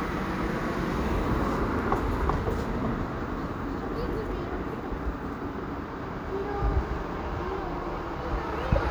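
A stream that likely lost a handful of samples at three points, at 1.79 s, 3.83 s and 5.06 s, shows dropped samples, each gap amounting to a fraction of a millisecond. At each point the waveform leaps straight from one value to a later one instead of moving smoothly between them. Far too little is missing for any of the sound to vanish; each drop is heard instead as a single sharp click, a thin vertical line across the spectrum.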